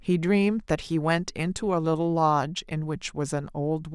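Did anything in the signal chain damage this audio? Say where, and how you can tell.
No, nothing stood out on listening that would point to damage at any stage of the chain.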